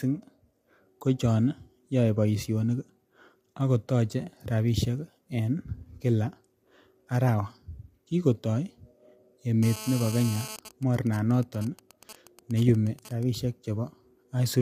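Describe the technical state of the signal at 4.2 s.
At 4.2 s, as throughout, the signal has likely passed through low-delay AAC compression, whose short frames blur harmonics at what sounds like about 32 kbps, leaving the speech plainly rough and grainy.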